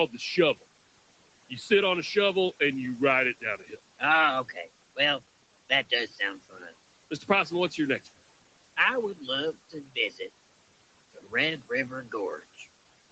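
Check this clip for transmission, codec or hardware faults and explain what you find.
One fault recurs in this clip. Speech cut by the noise suppressor occurs at 3.59–3.73, 6.49–6.71, 9.95–10.2 and 11.16–11.33 s. The suppressor mistook quiet speech for room noise and pulled it down by about 10 to 14 dB, so those moments sound swallowed and faint.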